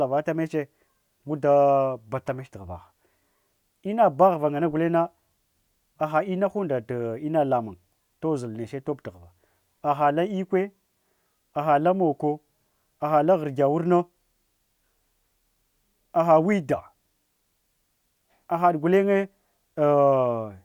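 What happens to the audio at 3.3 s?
Nothing goes wrong at 3.3 s; the speech carries on intact through that moment, with no dropout, click or distortion.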